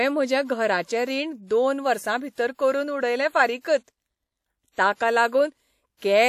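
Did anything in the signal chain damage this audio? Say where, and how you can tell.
Yes. At the codec stage the whole clip has a ringing, washy quality with hiss that swells and fades with the speech, and nothing above 16.8 kHz. The likely cause is WMA compression, with damage consistent with roughly 48 kbps quantisation zeroing weak spectral lines.

The same codec causes pre-echo at 2.55 s, 3.60 s and 4.95 s. A short hiss arrives 44, 41 and 51 ms ahead of sharp speech onsets, which sound softened. This is quantisation noise spread across a long transform block before each attack.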